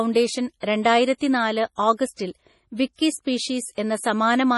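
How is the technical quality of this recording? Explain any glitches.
The technical quality is poor, with one fault running through the whole recording.

MP3 compression: From start to finish the speech has no content above 11.5 kHz, and the damage is heavy, which fits a low bitrate of around 32 kbps. The likely cause is an MP3 encoder short of bits, which cuts the treble at a fixed point and discards weak frequency lines that then flicker in and out between frames. The result is a watery, swirling texture, with metallic chirps on s sounds and smeared consonant attacks.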